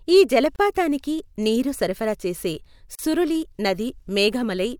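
A gap at a join of encoded pieces opens at 0.56 s, a silence of about 30 ms lasting until 0.59 s, and a second one follows at 2.95 s, running about 36 ms to 2.99 s. The speech was encoded in separate pieces and joined untrimmed, so each piece's encoder start-up delay and padded final frame remain as dead air. Both dropouts have their edges smeared by the codec, and the speech resumes exactly where it stopped.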